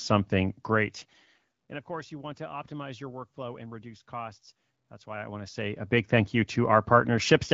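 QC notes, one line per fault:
No faults found on this speech clip; nothing flagged for correction.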